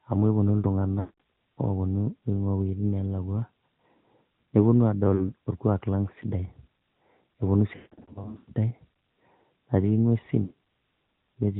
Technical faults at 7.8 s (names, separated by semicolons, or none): AMR narrowband mobile codec; lost AMR speech frames